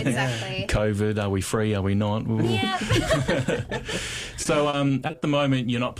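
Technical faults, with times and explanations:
4.43–5.23 s, repeated packet loss (robotic sound): Over those 0.8 s the audio keeps losing chunks, seven short gaps, the longest about 40 ms. Each hole gets patched by stretching out the sound that came just before, about 160 ms of filler in total, or a fifth of the stretch. The gaps come so close together that those repeated fragments run into a choppy stutter with pieces missing.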